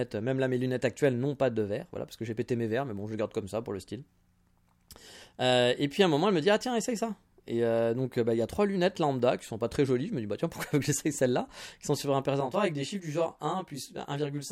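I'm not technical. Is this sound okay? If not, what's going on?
No. From 12.40 s to the end, right after "sont sur un", there's channel delay (comb filtering): one channel runs about a fiftieth of a second behind the other, and mixing them cancels parts of the speech, so it sounds rough and slightly doubled.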